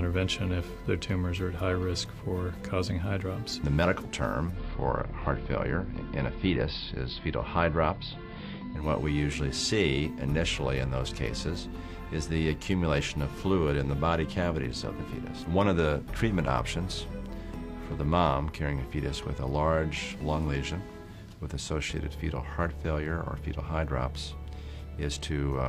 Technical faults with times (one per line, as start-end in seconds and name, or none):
4.45-8.89 digital radio blending to analogue